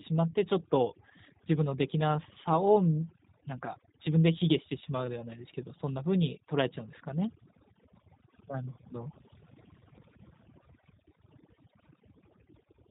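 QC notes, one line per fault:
Throughout, overdone noise removal: the background drops and breaks up into small twinkling, chirping specks, and the speech has its quieter edges and breathy tails shaved away. A noise reduction stage set far too hard is switching individual frequency bands down or off whenever they come close to its noise estimate, so low-level parts of the speech are removed along with the noise, and the leftover isolated bands flicker as specks.
Throughout, G.729 codec: the speech is clearly band-limited, with nothing above 4 kHz, and has a plainly audible rough, buzzy, slightly synthetic texture, with the remaining background specks warbling. The speech is being rebuilt by a low-rate model that uses a vocal tract filter, a pitch predictor and a few pulses per short frame, not carried as a waveform. The sound fits G.729A at around 8 kbit/s, and it adds its own coarseness on top of the noise-removal damage.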